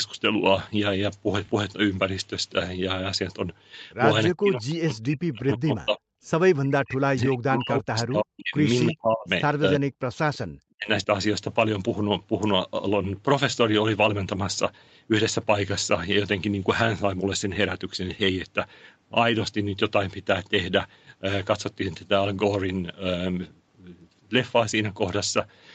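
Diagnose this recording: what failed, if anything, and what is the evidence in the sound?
Call processing stage, speech suppressed in double talk: the sound drops by about 40 dB at 4.32–6.0, 6.62–8.55, 8.88–9.28, 9.61–10.03 and 10.7–11.07 s. These drops show as near-empty gaps in the waveform and blank columns on the spectrogram. The likely cause is an echo canceller muting everything while both ends spoke at once.

Echo leak, also in call processing: at 10.34–10.38 s a faint copy of earlier sound returns 327 ms late, about 30 dB below the speech. It appears as a brief, weak smear on the spectrogram. This likely means the far end's echo canceller let some loudspeaker pickup through.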